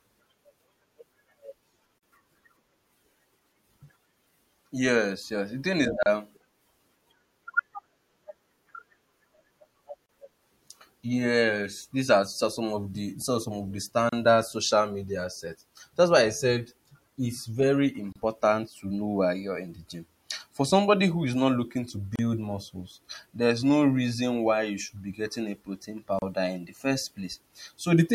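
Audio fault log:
1.98, 6.03, 10.06, 14.09, 18.12, 22.16 and 26.19 s: gap at a join of encoded pieces. Soft-edged silences, 44 ms first, then 32 ms, recur every 4.0 s. Untrimmed encoder delay and end padding remain at each join.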